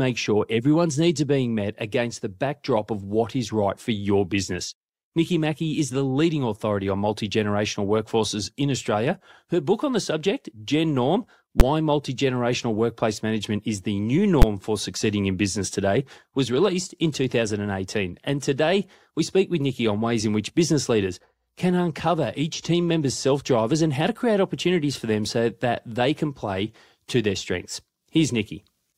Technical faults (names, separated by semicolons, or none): invalid numbers at full scale